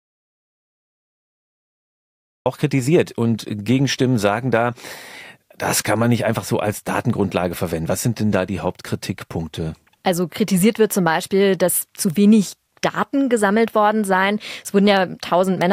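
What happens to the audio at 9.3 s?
Nothing goes wrong at 9.3 s: the speech runs on cleanly through that moment, with no dropout, click or other fault.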